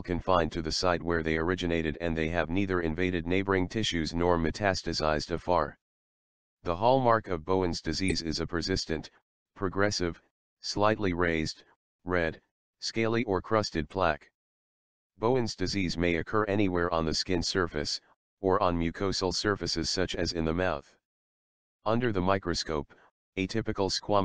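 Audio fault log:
8.08–8.12 s, 9.16 s, 13.91 s and 22.04 s, corrupt frame decoded: short chirps and blips. The first, at about 34 ms, is the loudest, peaking near -15 dBFS. The one at 22.04 s is moderate, around -30 dBFS, and those at 9.16 s and 13.91 s are faint, near -50 dBFS. Each time, damaged bits in one or a few compressed frames were decoded anyway, so misread gains and codes put energy at the wrong frequencies for roughly a frame's length.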